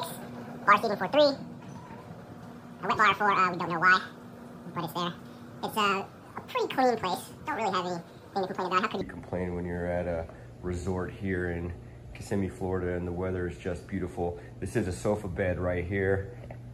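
From 0.00 to 9.01 s, the audio is read two samples at a time, so it plays at double speed. The reader treats each pair of samples as a single frame, as if the stream held two channels or samples twice as wide. Each stored sample is used only once per two, so everything runs at 2.0x and sits an octave higher.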